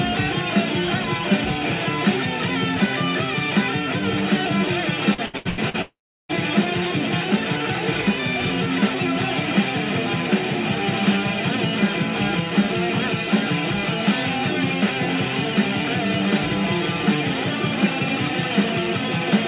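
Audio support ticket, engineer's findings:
Repeated packet loss (robotic sound), 5.14–5.77 s: choppy stretch, five short holes (longest 84 ms) patched by extending prior sound, about half the span concealed. Real audio survives between holes, unlike a single dropout. Component: network/jitter buffer.

Long network dropout, likely, 5.82–6.32 s: one continuous hole. Concealment buzz fades, then about 0.34 s of silence before audio resumes with the lost part missing. G.711 band-limit to 4 kHz throughout.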